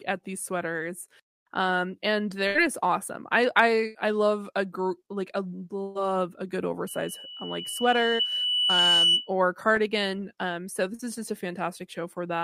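Held buzzes or fading hisses cut into the speech at 2.47–2.58 s, 3.87–3.98 s and 5.83–5.98 s, the last between "like I" and "a good". These are bursts of packet loss. Each time the receiver stretched the last sound for 70 to 120 ms while turning it down, then skipped ahead past 80 to 120 ms of lost audio.

From 6.87 s, just after "a good", a pure 3 kHz tone swells over roughly two seconds to a few dB above the speech and persists until 9.33 s, just before "cardigan um so". This is a loudspeaker feedback squeal: the microphone re-captured its own loudspeaker, and the loop gain at that frequency exceeded one.

Inside the squeal, at 8.15–8.22 s, and again at 10.95–11.02 s between "cardigan um so" and "is just a", brief smears replace the sound. These are short concealed packet losses. About 40 ms failed to arrive, and the decoder filled each gap by extrapolating the preceding audio.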